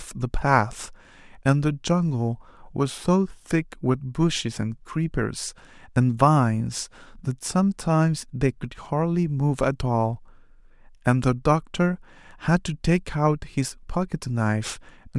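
No technical faults are audible.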